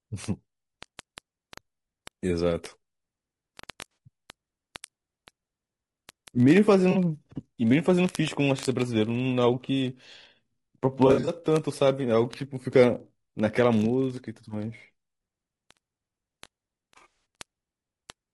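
From the start the speech sounds rough and grainy, with noise filling the gaps between harmonics and a top end that feels thin and somewhat synthetic. That's the signature of low-delay AAC compression, likely AAC-ELD at something like 32 kbps. Its short frames don't resolve pitch harmonics well, so at a bitrate this low the damage is plainly audible all the way through.

On top of that, from 0.12 s to 18.33 s there's a steady stream of word clock ticks, roughly fifty a second and around a thousand in total. They're sharp little clicks that vary in strength. The receiving device is running on its own clock, about 1000 ppm off the sender's, so every time the two slide past each other a sample gets dropped or repeated. That points to a single sample slipping at each tick.

Then come the AAC frame losses with concealment. At 3.91 s about 60 ms goes missing, which fits three lost frames, and at 6.91 s about 40 ms. 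Each sounds like a short smeared, noisy patch where the decoder is filling in from the last good spectrum. At 11.07 s it's worse: 140 ms lost, scattered over about 200 ms, with the longest run around 70 ms, so you get a stretch of phasey, broken-up sound. At 16.97 s 160 ms is lost across about 280 ms in shorter runs of up to about 40 ms, which makes it a string of short smeared patches rather than a fade.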